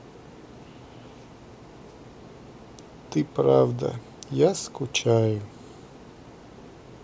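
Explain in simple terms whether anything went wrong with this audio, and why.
Listening to the speech in this recording, nothing went wrong: no problem stood out at any point.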